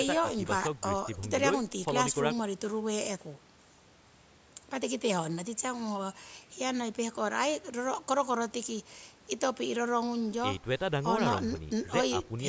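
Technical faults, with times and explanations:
Nothing to flag here: the speech has just gone through a call's usual microphone processing, which trims the deepest bass and leaves nothing above 8 kHz, and that's simply how a call path sounds rather than a fault.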